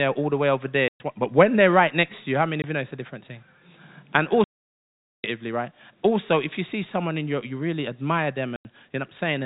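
Packet loss filled with silence hits this speech at 0.88–1.0, 2.62–2.64, 4.44–5.24 and 8.56–8.65 s. Those hard-edged gaps fit 10 ms packets, all through the telephone-band G.711 line.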